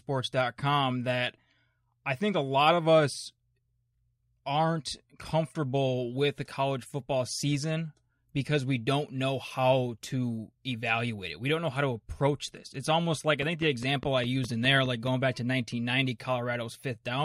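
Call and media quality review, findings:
Train of clicks, 13.42–15.08 s, after "almost like I", clearing before "back to". Steady ticking at about 4.9 per second, around ten near-identical pops, peaking a few dB above the speech and audible through gaps. Likely cause: periodic interference pulses from nearby equipment or a faulty connection or power supply.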